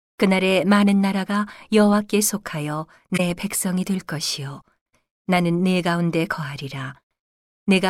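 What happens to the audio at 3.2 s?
From 3.14 to 3.21 s the speech is hit by a corrupt frame concealed, where the decoder detected damaged AAC data, fitting about three frames, and masked it.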